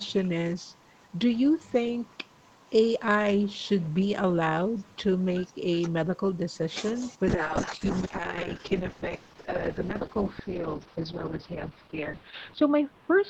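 From 7.3 s to the end, the speech turns rough and muffled, losing its top end and taking on a coarse, watery texture. That is a call bitrate drop: the bandwidth estimate fell and the Opus encoder was told to spend far fewer bits, consistent with a fall from about 32 kbps to around 7 kbps, holding at the lowest rate for about 5.3 s. At that rate the coded band narrows from 8 kHz to 6 kHz.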